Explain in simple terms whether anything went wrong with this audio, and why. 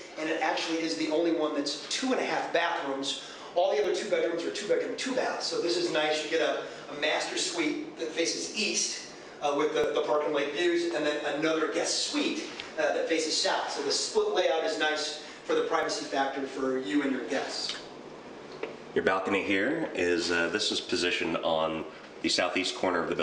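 Four tiny skips occur, at 3.84, 9.84, 15.83 and 21.82 seconds. They come every 6 seconds. This is overlap between stream segments. The audio arrives in 6-second pieces whose timings overlap slightly. The player trims away a sliver of real sound, so the waveform jumps.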